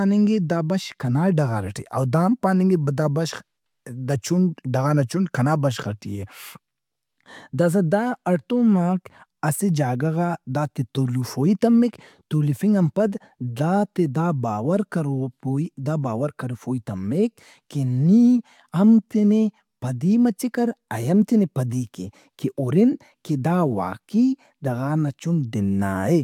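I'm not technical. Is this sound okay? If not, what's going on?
Yes, nothing here sounds wrong.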